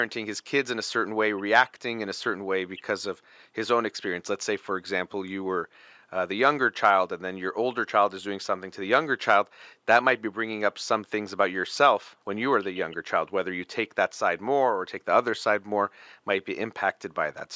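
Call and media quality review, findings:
No faults found: the speech sits well above a faint room noise floor about 54 dB down, and the call's microphone processing limits the band to nothing above 8 kHz, as expected for this path.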